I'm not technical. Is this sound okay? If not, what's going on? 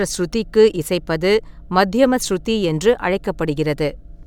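Yes, this one's fine: nothing in the recording jumps out as a problem, so you can relax about it.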